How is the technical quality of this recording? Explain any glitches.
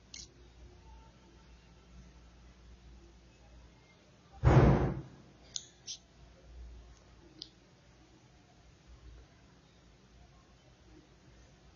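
The speech has plainly audible codec damage throughout. The sound is dull and smeared, with a warbling, fizzy texture on sibilants and sustained vowels. Nothing is present above about 6.9 kHz. This is likely AAC compression at a low bitrate, consistent with roughly 24 kbps. The encoder lowered its cut-off and coarsely quantised the spectrum, leaving holes and swirly artefacts. A plain low-pass filter would sound dull but clean, without this warbling.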